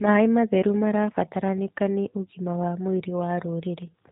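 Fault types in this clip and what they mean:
G.729 codec: The speech sounds plainly rough and synthetic, rebuilt from a vocal tract model and sparse pulses. Nothing passes above 3.8 kHz, fitting 8 kbit/s.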